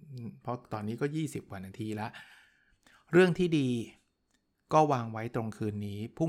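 No faults are audible anywhere in this speech recording.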